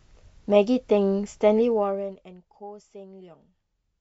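From 1.57 s to 2.42 s the speech drops by roughly 20 dB with zipper noise: the level falls in discrete steps, around fifty a second, rather than gliding, and each jump leaves a tiny click, so a fine ticking rides on the voice as it fades. On a waveform the envelope descends as a staircase instead of a ramp; a spectrogram shows faint vertical broadband lines at each step across that stretch.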